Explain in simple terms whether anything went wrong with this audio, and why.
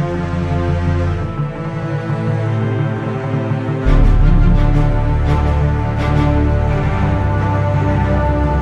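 Nothing went wrong that I could hear: listening closely, no part of the audio stood out as a problem.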